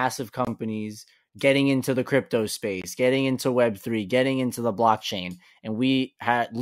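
At 0.45 s, and again at 2.82 s right after "getting into the crypto" and before "getting into", a block of digital silence lasting about 21 ms cuts in. The output buffer likely went unfilled and dropped to silence, which fits a 1024-sample buffer. The sound cuts out and back with no fade, and each gap sounds like a brief hole.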